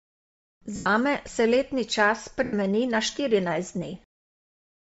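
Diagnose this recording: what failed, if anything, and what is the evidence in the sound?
The codec stage is the likely culprit for the tone of the whole speech clip. It has plainly audible Bluetooth LC3 compression: a breathy, grainy edge where the upper spectrum has been thinned out and replaced with shaped noise. That is what a low-rate transform codec does, and the damage level fits something around 32 kbps. The roughness is noise-like fizz on the top end.

The network or radio link dropped audio twice, at 0.76–0.86 s, just before "se letni čas", and at 2.44–2.53 s, between "se letni čas" and "na štirinajst". These are lost LE Audio frames, about 100 ms and 90 ms long, consistent with runs of 10 ms frames. The decoder's concealment repeats the last spectrum with scrambled phase, so each gap is filled with a copy of the last sound that fades toward silence rather than a hard click or clean dropout.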